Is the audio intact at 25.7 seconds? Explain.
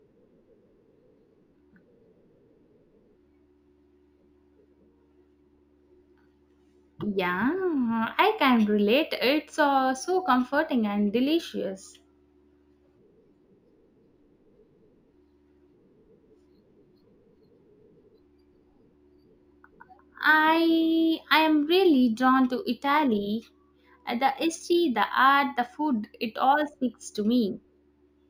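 No. At 25.7 seconds, as throughout, there is imaging from linear upsampling: straight-line interpolation from 16 kHz to 48 kHz dulls the top end and leaves a faint mirrored band between 8 and 16 kHz, about 30 dB down. On a spectrogram it appears as a ghostly reflected copy above 8 kHz, heard as a light metallic shimmer on sibilants.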